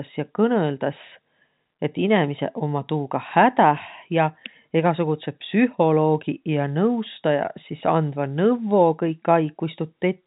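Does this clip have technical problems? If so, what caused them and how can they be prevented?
No, this speech clip has no technical problems to fix. It has been through G.711 mu-law telephone coding at 64 kbps, which is why nothing above about 3.8 kHz comes through.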